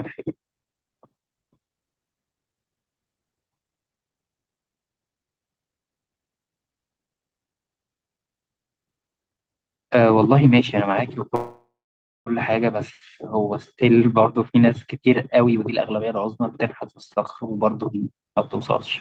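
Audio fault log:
11.35–12.29 s, call audio freeze: the speech stops and the last sound is stretched into a fading buzz that sinks to silence for about 0.56 of the 0.91 s stall. The likely cause is packets held up in transit, leaving the jitter buffer empty while the receiver kept playing out what it last had. When delivery resumed, the speech carried on from the exact point it halted, so nothing was lost. The whole call now runs about 0.91 s later.
15.39–16.44 s and 16.94–18.34 s, jitter buffer speed-up: the speech runs noticeably hurried, at about 115% and then about 116% of normal pace, with the pitch unchanged. The buffer was holding more audio than its target. To reduce the delay, the receiver cut out many tiny slices of one or a few pitch periods in a row, about 150 ms in the first stretch and 200 ms in the second.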